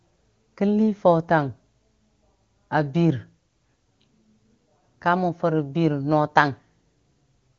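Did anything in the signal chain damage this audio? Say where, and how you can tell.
No, nothing in the chain damaged this speech; what you hear is a wideband HD Voice call path whose top end stops near 7.5 kHz, and its quality fits AMR-WB running at its highest rate of around 24 kbit/s.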